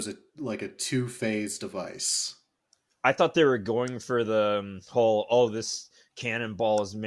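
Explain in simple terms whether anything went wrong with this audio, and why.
Nothing went wrong here; no faults can be heard.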